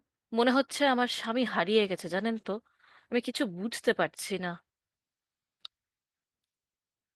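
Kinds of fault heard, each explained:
No faults identified across the speech clip.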